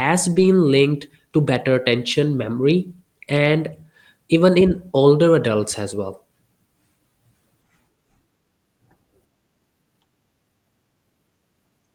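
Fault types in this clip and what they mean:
Lost packet rebuilt from error correction: near 0.35 to 0.45 s, just before "linked to better attention", about 60 ms of speech turns rougher and noisier, rebuilt from the next packets' low-bitrate copies.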